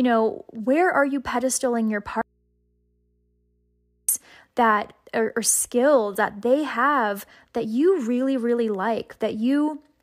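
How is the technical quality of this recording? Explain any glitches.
The recording has one clear glitch, an audio dropout to a faint residue, from 2.21 s to 4.09 s. The likely cause is a break in the signal feed ahead of a stage that stayed live, so for about 1.9 s the speech is gone and only mains hum from the open input remains, sitting roughly 45 dB below the normal speech level. The speech cuts off abruptly and returns just as suddenly, unlike a natural pause or a fade.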